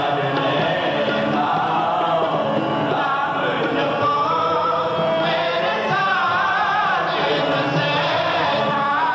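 Nothing in this audio stands out as a technical problem; there's no glitch or dropout anywhere along the way.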